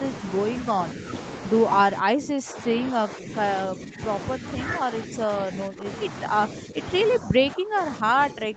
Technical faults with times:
1.85-3.33 speech suppressed in double talk
3.65-4.01 speech suppressed in double talk
4.36-4.44 speech suppressed in double talk
4.84-5.86 speech suppressed in double talk
6.54-6.78 speech suppressed in double talk
7.19-8.56 speech suppressed in double talk

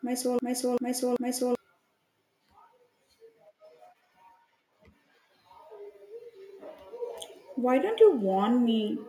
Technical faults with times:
0.00-1.55 broken-record loop

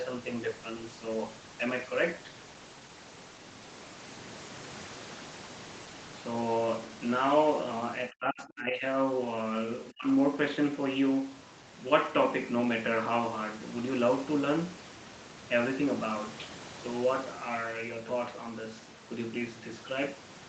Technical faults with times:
8.09-8.85 speech suppressed in double talk
9.90-10.07 speech suppressed in double talk

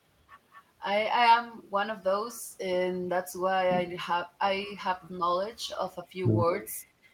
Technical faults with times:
0.52-0.63 echo leak
2.35-2.41 echo leak

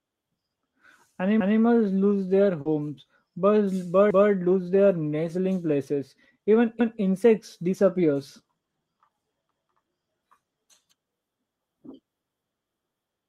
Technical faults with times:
1.40-1.61 overlapping chunks
2.61-2.67 short concealed packet loss
2.65-2.67 lost packet rebuilt from error correction
4.10-4.31 overlapping chunks
6.80-7.01 overlapping chunks

